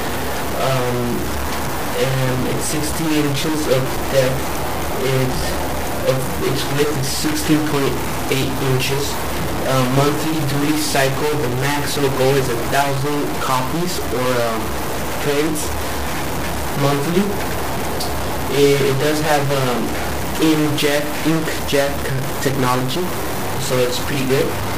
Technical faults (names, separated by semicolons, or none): stuck bit